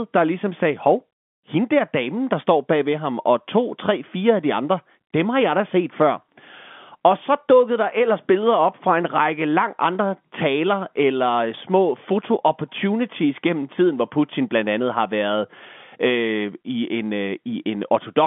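No technical faults are audible in the speech; the narrow telephone-band sound throughout is ordinary G.711 line coding, with the top rolled off around 3.4 kHz and at most a faint coding noise under the signal.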